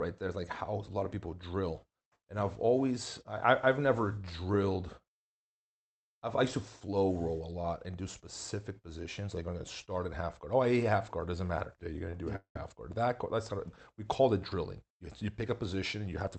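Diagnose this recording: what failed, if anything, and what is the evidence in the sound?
Network jitter buffer: a short stall from a late packet at 12.10 to 12.14 s, before "to do a half". About 24 ms is stretched, and nothing is lost.

Call audio freeze at 12.36 to 12.56 s, between "to do a" and "half guard". A fading buzz then 110 ms of silence fill 194 ms. The likely cause is delayed packets emptying the buffer.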